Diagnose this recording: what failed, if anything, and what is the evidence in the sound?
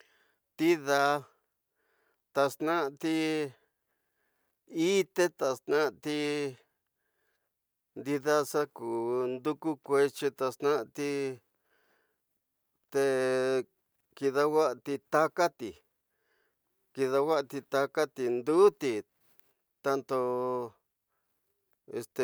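Nothing in this speech recording gives any sign that a stage along the chain went wrong, so there's nothing to diagnose here.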